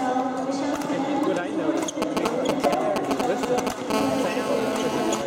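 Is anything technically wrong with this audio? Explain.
Yes. A nearby 2G handset is being picked up by the audio circuitry, in two distinct phases.

GSM signalling bursts, 2.02 to 3.92 s: The phone is transmitting only short groups of radio bursts while it exchanges signalling with the network. The audio stage rectifies each radio pulse into a voltage step, so the sound gets a galloping dit-dit-dit of brief buzzes with a 217 Hz repetition. These sit slightly louder than the wanted audio, so the pattern is prominent.

GSM phone buzz, 3.94 to 5.22 s: Once a call is established, the handset transmits continuously in 217 Hz bursts. Rectification of this steady pulse train produces a hard, raspy buzz at 217 Hz, rich in harmonics and unrelated to the programme material. It runs without interruption to the end of the fault and sits about 5 dB below the wanted audio.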